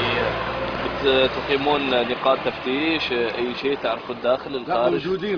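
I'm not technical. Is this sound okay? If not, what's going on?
Yes, nothing wrong can be heard anywhere in this recording.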